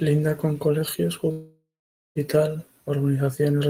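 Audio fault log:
1.31–2.18 s, long network dropout: about 0.84 s of speech is lost, likely through packets that never arrived. The final sound stretches into a fading buzz, then about 0.5 s of silence follows. On a spectrogram, smeared harmonics dissolve into a blank band before speech resumes.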